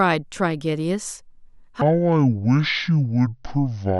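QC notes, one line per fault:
1.81–4.00 s, section at the wrong speed: from 1.81 s to the end, the speech runs at about 0.55 times its normal rate, so it drags and drops by roughly ten semitones, turning deep and slow. The cause is likely playback against the wrong clock. Speed and pitch fall together at the same instant, which separates this from a pitch shift, where timing holds, or a time-stretch, where pitch holds.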